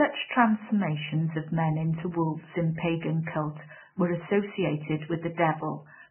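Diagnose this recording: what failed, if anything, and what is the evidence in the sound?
The codec stage failed, most likely a Vorbis encoder run at a very low bitrate, in the region of 10 kbps. Throughout the speech there is nothing above 3 kHz, and the band that remains is heavily damaged. The encoder kept only a coarse spectral floor and quantised the residue so roughly that fine harmonic detail has turned into noise of similar energy. The result is hissy, grainy speech with roughened tones and dulled consonant edges.

The same codec stage also produced pre-echo from 3.23 to 3.27 s, a smear lasting about 39 ms. A sharp attack sits late in a transform block, and the encoder spread that block's quantisation noise evenly across its full length. Noise scaled for the loud onset therefore fills the quiet gap just before it. The attack arrives behind a brief hiss and sounds softened rather than crisp.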